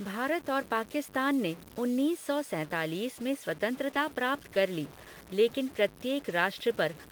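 From start to end, the speech carries a gritty, grainy distortion that shifts with the sound. Quiet passages turn rough and sputter. The likely cause is low bit depth without dither. The grit fits roughly a six-bit signal, truncated, with error about 20 dB below the speech.

At 3.91 s, between "सौ सैंतालीस में" and "प्राप्त कर ली लेकिन", a short concealed packet loss leaves a brief smear. Audio never arrived in time. The decoder stretched the preceding sound to bridge the hole, lasting about 0.03 s.

Right after, at 3.95 s, one lost packet is rebuilt from error correction, leading into "प्राप्त कर ली लेकिन". At 6.29 s a second one follows. Each lasts 20 ms and fits a single lost packet. The decoder played a low-bitrate backup copy, so nothing drops out. Those moments sound rougher and noisier.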